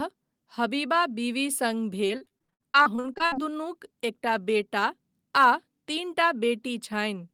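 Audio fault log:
2.07–3.34 s, repeated packet loss (robotic sound): packets kept dropping, and each gap of up to 60 ms was patched by extending the previous sound, leaving over a third choppy.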